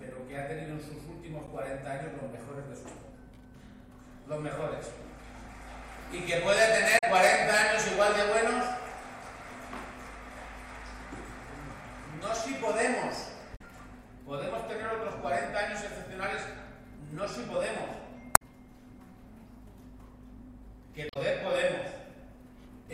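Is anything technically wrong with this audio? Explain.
Yes. The clip has damaged data in a compressed stream at five points: 1.47–1.49 s, 6.95–7.04 s, 13.53–13.61 s, 18.33–18.42 s and 21.07–21.17 s. At each, a short stretch of the encoded bitstream is corrupt, so the decoder misreads those frames, loses frame sync and scans forward for the next valid header. Each event is a brief chirp, squawk, click or short hole lasting roughly 20 to 100 ms.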